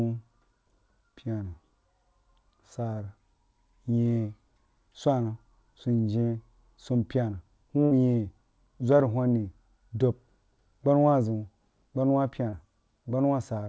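Packets were lost in the network on this speech recording, which came over a call path whose audio stops at 8 kHz, consistent with G.722 at 64 kbps. A burst of packet loss hits from 7.85 to 7.94 s, just after "sunyeh sumpyena". The receiver stretched the last sound for about 58 ms, holding it and fading it down, and then the speech resumes roughly 60 ms further on with that stretch gone. A short concealed packet loss follows at 12.50 to 12.55 s, after "gbama zəun gbana wa". About 28 ms was patched by continuing the preceding sound and blending back in, heard as a brief smear where roughly 30 ms of real audio never arrived.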